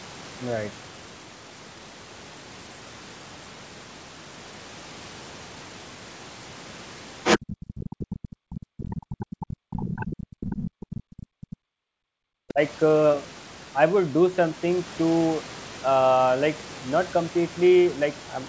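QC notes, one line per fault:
7.24 to 11.56 s, other side's voice leaking through: a second voice slips in under the main talker in four scraps, at 7.24 to 7.39 s, 7.84 to 8.18 s, 8.51 to 9.36 s and 9.97 to 11.56 s. The first blip is short but about as loud as the talker. The later ones sit about 15 dB down. It's likely loudspeaker playback reaching the mic that the echo canceller didn't fully clear.
7.38 to 12.6 s, speech suppressed in double talk: right as that other voice comes in, the main talker keeps ducking and breaking up for roughly 5 s in total, dropping as much as around 40 dB at the worst points. Both sides are talking over each other here. The likely cause is the echo canceller failing to tell the talker apart from the echo and pulling down everything. Across all of it the band tops out near 8 kHz, as expected for a wideband call path.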